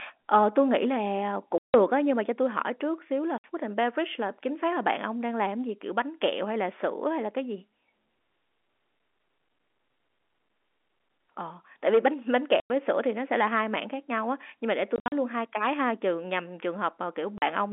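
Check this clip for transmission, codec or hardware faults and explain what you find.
There's one real fault here: packet loss filled with silence. The audio drops to dead silence at 1.58–1.74 s, 3.38–3.44 s, 12.6–12.7 s, 14.96–15.12 s (scattered short holes, longest 60 ms) and 17.38–17.42 s. The receiver played nothing for missing packets, so the holes have hard edges, and gap lengths fit 20 ms packets. The narrow phone-band sound from the G.711 A-law coding is expected.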